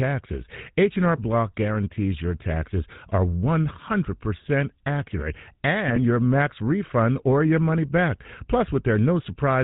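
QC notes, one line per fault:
Throughout: GSM full-rate codec, plainly audible buzzy, gravelly roughness with nothing above 4 kHz, consistent with 13 kbps pulse-excited vocal-tract modelling that discards most excitation detail.
1.16–1.19 s and 5.86–6.01 s: GSM bit errors, before "guarantees your taxes are" and "your max refund or". Flipped bits corrupt filter, pitch or gain values, bending the spectrum or level. The first burst is about one frame long and the second spans several.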